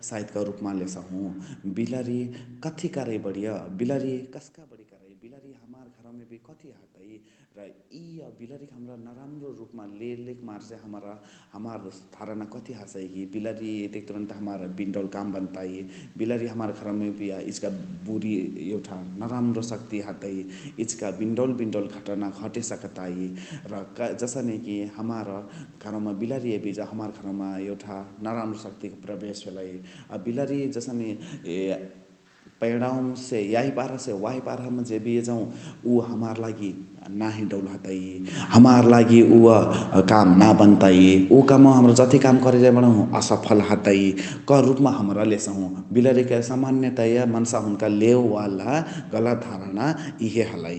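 The automatic gain control in this speech recording reacts twice to level changes at the microphone. First, an automatic gain rising: around 4 s the talker moves back and the input drops by about 22 dB. From 4.68 to 16.85 s the control slowly pushes its gain up by about 21 dB, so the voice and the room noise behind it swell together over twelve seconds until the level is restored. Then, near 38 s, the talker moves again. The result is an automatic gain falling from 38.29 to 45.57 s: the gain is pulled down by about 16 dB, so the voice sinks gradually, taking the background down with it. Inside that, a brief automatic gain rising from 38.82 to 41.92 s adds about 4 dB back, making the descent uneven. The audio also passes through an Opus call path whose top end stops at 8 kHz, and its coding noise fits a bitrate around 32 kbps.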